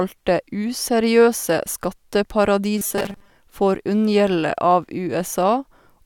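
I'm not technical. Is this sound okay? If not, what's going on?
No. From 2.78 to 3.30 s, just before "får unngjelde", audio likely arrived too slowly, so the playback kept repeating tiny snippets, about 5 ms each, for most of that stretch. This is robotic sound from repeated short buffers: a stiff metallic 200 Hz buzz.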